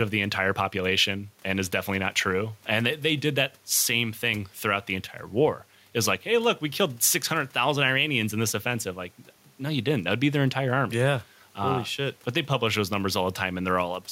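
No technical faults can be heard anywhere in the speech recording; the signal stays continuous and stable throughout.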